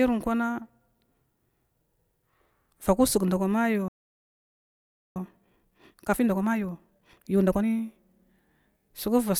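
A speech clip with two linked faults. The player most likely ran dry of buffered data or had its thread blocked at 3.88 s, causing a playback stall: the sound stops mid-flow and the output stays silent for about 1.28 s, until 5.16 s. From 5.16 s to 7.7 s comes time-compressed catch-up, where the player works off the backlog it built up by dropping small slices and cross-fading across them, so the speech runs about 1.5 times faster at unchanged pitch.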